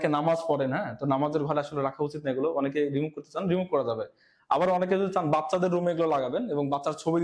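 Nothing stood out on listening to this audio.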